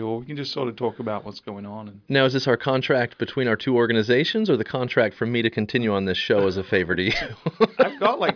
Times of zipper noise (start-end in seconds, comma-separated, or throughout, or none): none